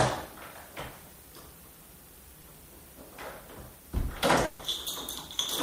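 At 2.41 to 2.44 s there is a short concealed packet loss. About 20 ms never arrived, and the receiver extended the previous sound, leaving a brief smear. At 4.45 to 4.60 s comes a burst of packet loss. The receiver stretched the last sound for 140 ms, fading it out, then resumed further on.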